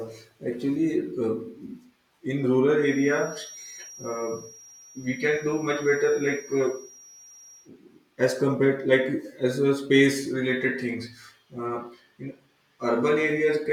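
Speech with a feedback whistle from 2.75 s to 7.71 s, ending just before "as compared": a thin, steady 5.7 kHz tone about 20 dB below the speech, swelling and fading slowly in level. The likely cause is a loudspeaker-to-microphone loop held right at the edge of feedback.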